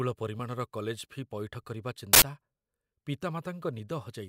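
At 2.13 s the speech is cut by an uninitialised buffer. A block of audio was played out before any samples had been written into it. Whatever data was left in that memory was read as sound. The result is a harsh burst of digital noise lasting about 85 ms, ending at 2.22 s. Its length fits a 4096-sample buffer.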